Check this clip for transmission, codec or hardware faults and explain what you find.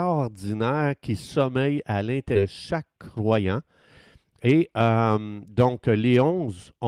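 Two kinds of fault are audible in this speech clip: one skip ahead and two jitter buffer speed-ups.

From 2.35 to 2.37 s there is a skip ahead. Roughly 0.4 s of audio was discarded. Playback jumps forward with no gap, and the two sides join almost directly.

The jitter buffer speed-ups run from 2.45 to 3.60 s at 113% speed and from 4.24 to 4.72 s at 110%. The receiver trimmed short pitch-period pieces to shrink excess delay. The speech sounds hurried at unchanged pitch.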